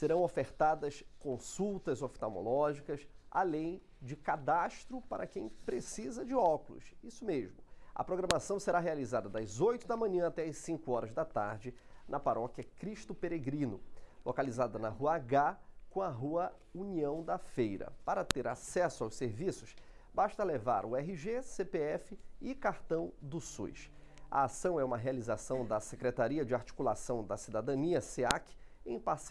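Sharp, loud clicks at 8.31, 18.31 and 28.31 s, spaced exactly 10 s apart, are a file header played as audio: each joined 10 s piece kept its WAV header, and those bytes play as samples, snapping regardless of the surrounding signal.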